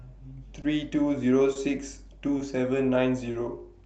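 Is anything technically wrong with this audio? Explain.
Yes. The sender's audio clock runs slow against the receiver's, by roughly 2 percent. This is clock drift between sender and receiver. Speech reaches the jitter buffer a little too slowly, so the buffer keeps draining and the receiver has to stretch or repeat small pieces of sound to keep playing. The result is a series of tiny timing hiccups spread unevenly through the speech, rather than one clean steady flow.

Four short stalls from late packets occur at 0.61, 1.53, 2.37 and 3.31 s. Each lasts about 40 ms. Each time, a packet was not there when it was due, the jitter buffer ran dry, and the receiver held the last sound for about 20 ms until the packet arrived. It then carried on from the same point, so nothing is lost. At each of these moments the speech briefly sticks or smears, with a faint buzz or dip. The audio passes through an Opus call codec that limits its bandwidth to about 8 kHz.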